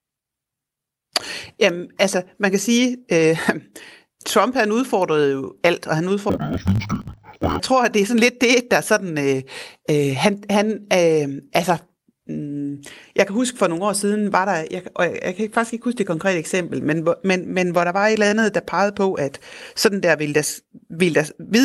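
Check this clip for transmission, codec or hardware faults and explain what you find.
One fault, in the speech between "jo alt og han" and "tror at det er", from 6.30 to 7.61 s: interleaved audio read as planar. The alternating stereo samples were read as first and second halves, so 20 ms blocks play at half speed. That gives an octave drop and a robotic buzz at 50 Hz.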